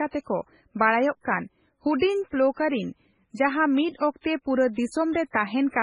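From start to finish the speech sounds watery and swirly, with a metallic chirp on s sounds, smeared attacks, and no treble above 10.5 kHz. The likely cause is heavy MP3 compression at a very low bitrate, around 16 kbps. Starved of bits, the encoder cuts everything above a fixed treble limit and zeroes weak frequency lines, which flicker on and off from frame to frame and produce the swirling texture.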